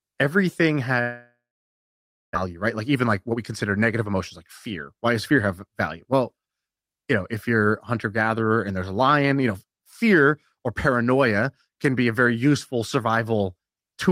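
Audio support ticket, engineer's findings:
Long network dropout, 1.01–2.37 s: preceding sound smeared into a fading buzz, then about 0.93 s of near-silence; about 1 s of audio never returns. Spectrogram: harmonics stretching and decaying, then an empty band. Likely packet loss on the network path, concealed by the receiver.

Jitter buffer speed-up, 2.46–4.13 s (about 113%, roughly 0.2 s removed, ending just before "like fear"), 4.91–5.69 s (about 106%, just after "like fear"), 6.12–6.41 s (about 111%): hurried delivery, pitch unchanged. Receiver trimming pitch periods to drain excess buffered delay. Waveform: compressed syllable spacing; spectrogram: unchanged harmonic spacing.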